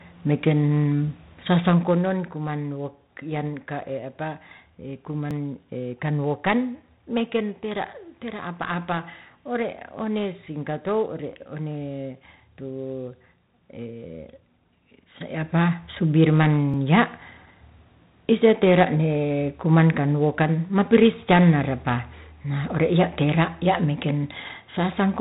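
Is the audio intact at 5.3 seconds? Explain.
No. At 5.31 s there is a small jump as roughly 10 ms of speech goes missing, likely a dropped buffer (overrun) that spliced the surrounding audio together. Throughout, including this moment, heavy 4-bit ADPCM compression at 32 kbps adds gritty, level-following hiss.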